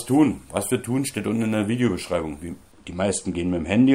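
From 2.72 s to the end at 3.95 s, the sound turns dull, losing air and sheen at the very top while the lower range stays intact. This is channel delay (comb filtering): one channel runs a tiny fraction of a millisecond behind the other, roughly two samples, and when the two are folded to mono the shared content cancels, cutting a first notch somewhere around 10 kHz.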